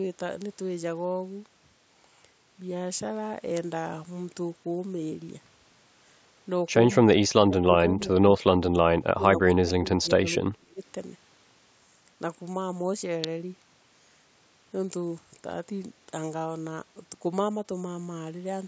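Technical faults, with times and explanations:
0.42 s, 3.57 s and 13.24 s: electrical switching spike. Each is a sharp snap or tight cluster of clicks sitting on top of the speech, far too abrupt to be part of it. The likely cause is a nearby switch, motor or static discharge arcing briefly, with the audio line picking it up.
7.04–7.18 s, 7.40–8.09 s, 8.38–8.85 s, 9.15–9.23 s, 9.63–10.23 s and 10.41–10.80 s: speech suppressed in double talk. The speech dips and breaks up in fragments, falling by roughly 20 to 35 dB at its deepest. This is likely an echo canceller that could not tell this talker from loudspeaker echo while the other side spoke, so it turned both down.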